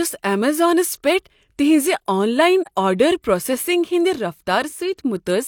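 A speech clip with AAC frame loss with muting at 2.63 to 2.68 s, between "آن لاین" and "آرڈر پروسیسنگ". The decoder zeroed the missing spectrum, and overlapping windows fade the sound out and back in, leaving a soft-edged 43 ms gap that fits one lost frame.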